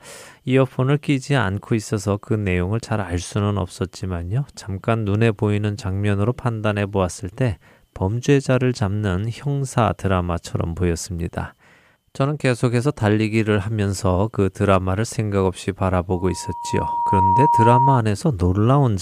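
A speech clip with loudspeaker feedback squeal from 16.10 to 18.03 s. A 948 Hz tone swells over about a second to roughly 5 dB above the speech. Microphone and loudspeaker formed a loop with gain above one.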